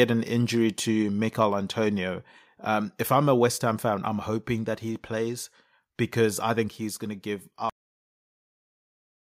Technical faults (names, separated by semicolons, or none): microphone overload; microphone volume stepped down; cut-off end